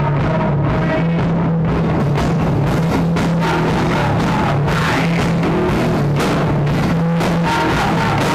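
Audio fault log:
0.0 to 2.0 s, de-emphasis applied wrongly: a treble-cut filter meant to reverse pre-emphasis was run on audio that needed no such correction, so the response slopes steadily downward, about 14 dB lower at 10 kHz than at 1 kHz, leaving the sound dull and muffled.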